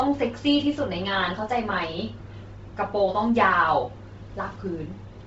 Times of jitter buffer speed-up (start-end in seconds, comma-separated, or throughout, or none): none